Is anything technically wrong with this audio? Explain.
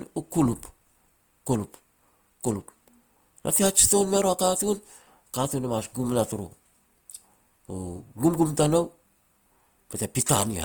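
Yes. Throughout the speech there is plainly audible Opus compression, likely from music-mode encoding at a low bitrate around 24 kbps. Sparse bits force upper bands to be refilled with folded or noise content, so the sound turns grainy and rough. A spectrogram shows full bandwidth to about 20.1 kHz, with smeared, noisy high bands rather than holes.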